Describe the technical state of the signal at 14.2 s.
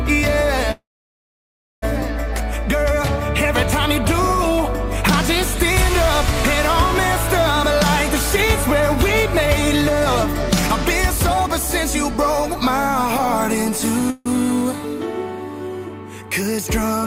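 A call audio freeze spans 14.1 to 14.28 s, likely from delayed packets draining the jitter buffer. For 155 ms the last sound is stretched into a fading buzz, then playback resumes unchanged but late, shown as a smeared, decaying band on a spectrogram.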